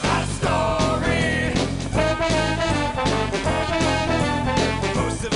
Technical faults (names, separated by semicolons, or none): none